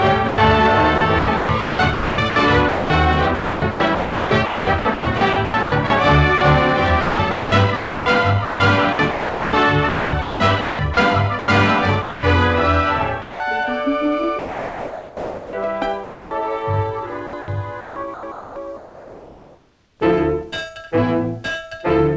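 Stretches of sound dropped by the voice detector, each likely caused by a sender-side detector misjudging the signal as background and halting transmission, occur at 0.29 to 0.38 s, 12.02 to 12.23 s, 13.22 to 13.40 s, 14.39 to 15.53 s and 16.04 to 16.31 s. Each time the receiver fills with synthetic comfort noise, so the sound gives way to a steady hiss for 90 ms up to more than a second. The longest gap, at 14.4 s, loses close to 0.9 s of real sound.

Alongside these, three longer passages of sound chopped by the voice detector run from 0.98 to 6.41 s, 7.01 to 11.48 s and 17.27 to 20.0 s. Here the detector likely kept toggling transmission on and off, swapping in comfort noise for about 2.3 s, 2.0 s and 1.8 s in total. The result is choppy, broken-up sound, all within the call codec's band that stops at 8 kHz.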